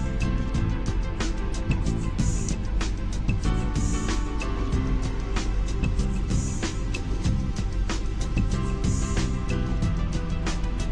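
At 2.47 to 2.49 s a skip ahead occurs. About a second of audio was dropped while later audio was already queued, and the two sides are butted together with no filler. A spectrogram shows an abrupt vertical seam where unrelated patterns meet, with no silent gap in the waveform.

From 2.52 to 7.15 s a jitter buffer speed-up follows. The receiver trimmed short pitch-period pieces repeatedly, removing about 0.2 s so the audio runs at 104% speed with unchanged pitch. A second stretch at 7.62 to 10.88 s runs at 103%, shedding about 0.1 s. Harmonic spacing stays constant on a spectrogram while events crowd slightly closer in time.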